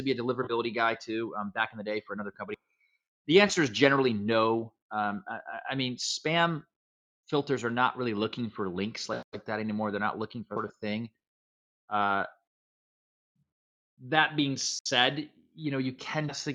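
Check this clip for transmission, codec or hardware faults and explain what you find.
One fault is audible. Sound cut by the noise suppressor, 2.31 to 2.96 s: the suppressor misreads the sound as noise, dipping it by about 21 dB for roughly 0.4 s.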